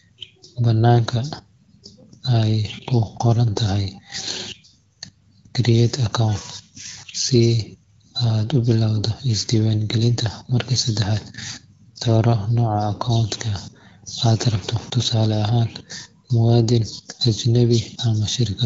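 No technical faults are audible.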